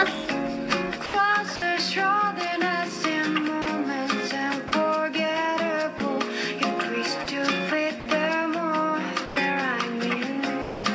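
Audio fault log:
1.06–1.62 s, sound chopped by the voice detector: The sender's voice detector likely toggled between sending and muting several times, so about 140 ms of sound within this span is swapped for comfort noise, making the sound choppy.
3.62–3.66 s, 4.68–4.72 s, 5.98–6.00 s, 7.24–7.26 s, 8.00–8.06 s, 9.26–9.36 s, 10.62–10.84 s, sound dropped by the voice detector: Quiet passages were misjudged as background and not sent, probably by the same detector, so 20 to 220 ms of sound gives way to steady comfort noise.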